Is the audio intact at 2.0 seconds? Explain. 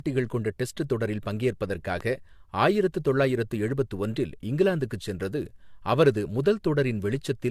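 No. From 2.01 to 2.03 s a single loud pop sits on top of the speech, which carries on underneath it. A sudden voltage step, likely from a switch, plug contact or static discharge, enters the signal and is shaped by the circuitry after it into a short, sharp pulse peaking about 5 dB above the speech level. On a waveform it shows as one narrow spike standing clear of the surrounding envelope. On a spectrogram it is a thin vertical stripe spanning the full frequency range.

The same moment also carries the generation loss present across the whole clip. Repeated lossy decoding and re-encoding, which fits about three passes of AAC at 64 kbit/s, has quantised the audio again on shifting frame grids each time. The noise and spectral holes built up, so the speech sounds swirly, hollow and smeared, with softened consonant attacks. On a spectrogram this appears as patchy, flickering gaps and a ragged upper band instead of smooth harmonic detail. 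The waveform looks blurred at onsets.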